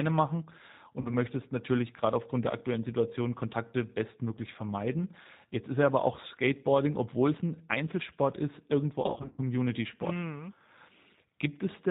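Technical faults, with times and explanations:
Throughout: G.729 codec. Everything above 4 kHz is missing, so the sound is narrowband, with that slightly rough, synthetic edge you get when speech is rebuilt from a vocal tract filter, a pitch predictor and a few pulses per 10 ms frame rather than sent as a waveform. The damage is plainly audible here, and the character points to G.729A at 8 kbit/s.
1.00 to 1.15 s: VoIP packet loss concealed by the speech codec. About 40 ms went missing, which fits two lost packets. The decoder filled the hole by stretching its last pitch and filter, so you hear a short stretched-out smear, and the sound stays a bit weak into "natürlich gerade aufgrund der".
9.02 to 9.40 s: the same packet loss concealment, heavier. Right after "ist irgendwo" about 220 ms is lost, scattered over 360 ms, with the longest run 60 ms, pointing to around eleven packets. The concealment keeps guessing from stale frames, so it comes out as stretched-out sound that fades.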